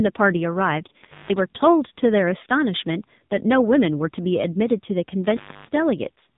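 Speech that sounds thin, buzzy and synthetic from start to finish, with nothing above about 3.8 kHz and a heavy, processed edge on every syllable. That is AMR narrowband mobile codec damage: the AMR-NB phone codec rebuilds speech from a coarse vocal-tract model, and damage this severe points to a low bitrate, around 6.7 kbps. Between 1.03 and 1.39 s the sound crackles and then drops out for about 0.18 s, leaving only faint hiss before it returns with another crackle. This is an intermittent contact, a loose plug or cable briefly breaking the signal path.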